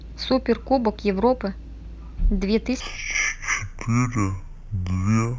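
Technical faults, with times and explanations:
2.80 to 5.39 s, stereo read as mono. From 2.80 s to the end, the speech slows to half speed and drops a full octave, 12 semitones lower. The player takes the left and right samples, which alternate in the stream, and plays them one after another as if they were one channel. Each moment of sound then fills twice the samples it should. Playback therefore runs at half rate, and that lowers the pitch by an octave.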